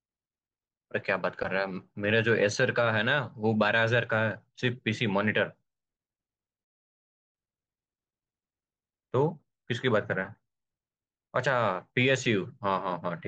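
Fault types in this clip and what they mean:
Playback stall: the speech cuts to silence at 6.64 s for about 0.69 s, likely the player starving for data or its thread getting blocked.
Time-compressed catch-up: from 7.35 to 8.03 s the speech runs at 2x speed but normal pitch, as small chunks get cut and cross-faded to clear the backlog.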